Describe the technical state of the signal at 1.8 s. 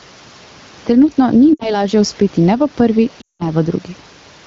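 At 1.8 s the sound drops to near silence, then returns rough: lost AMR speech frames from 1.53 to 1.85 s, about 60 ms concealed by repeating the last good parameters with falling gain. Throughout, the gain swings by about 5 dB around loud sounds, bringing loud and soft parts closer in level, which is gain pumping, likely from excessive gain driving a fast limiter.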